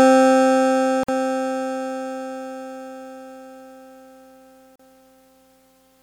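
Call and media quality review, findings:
Music gaps at 1.03 s for 51 ms and at 4.76 s for 37 ms, then resumes where it stopped. Edges smeared by the codec. Gap at a join of encoded pieces: encoder start delay and last-frame padding left untrimmed at each join.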